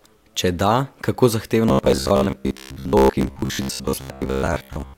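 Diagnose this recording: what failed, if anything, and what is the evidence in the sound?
The driver buffer was likely starved from 1.69 s to 4.97 s, replaying its last block instead of fresh audio. The result is robotic sound from repeated short buffers: a rigid, metallic 66.7 Hz buzz, fitting 15 ms blocks, with most real speech skipped.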